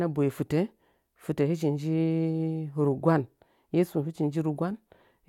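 Nothing technical goes wrong anywhere in this bit of speech, so there's no fault to point to at any moment.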